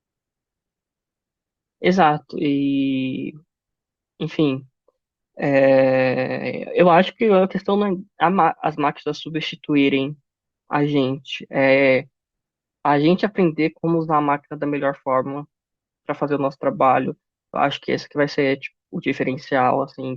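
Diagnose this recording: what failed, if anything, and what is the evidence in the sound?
Nothing in the speech recording points to a failure at any stage of the chain. No moment in the audio stands out as evidence of a fault, so there is no time to point to.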